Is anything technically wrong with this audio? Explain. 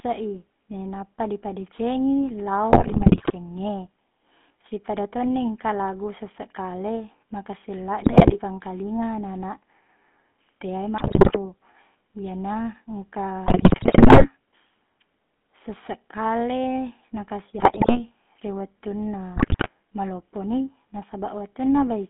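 Yes. The whole recording has passed through the GSM full-rate codec. That coder models the vocal tract and feeds it a coarse, regularly spaced pulse excitation, which fits a 13 kbps GSM full-rate stream. The speech is confined to a phone band of about 200 Hz to 3.4 kHz, and the codec damage is plainly audible: the voice has a buzzy, gravelly roughness over all of it, and it sounds thin and boxy.

On top of that there are GSM bit errors at six points: 2.7 to 3.32 s (just after "i nainappa dipedecengi"), 8.01 to 8.39 s, 10.98 to 11.37 s, 13.46 to 14.27 s, 17.58 to 18.01 s and 19.36 to 19.7 s. During each burst, corrupted bits reach the decoder and scramble the filter, pitch and gain values frame by frame. The speech breaks into squawks, pops and gargling for a fraction of a second, then recovers.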